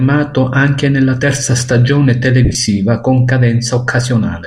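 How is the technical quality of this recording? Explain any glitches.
One fault mars the recording, a brief dropout in the speech. Between 2.45 and 2.55 s, lost LE Audio frames remove about 60 ms of audio in short runs of up to roughly 20 ms. The LC3 decoder fills each gap by repeating the last spectrum with randomised signs, so the speech briefly turns into a hissy smear. A spectrogram shows blurred, noise-like patches in place of clear harmonics, and the waveform shows jagged fill in those spots.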